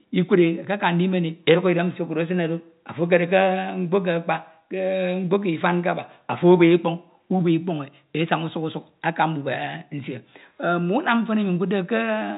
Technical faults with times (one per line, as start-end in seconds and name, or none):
none